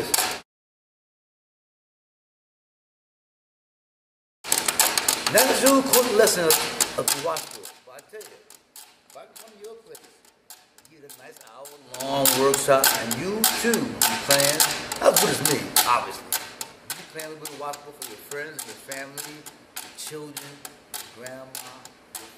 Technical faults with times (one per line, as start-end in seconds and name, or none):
6.97-7.80 zipper noise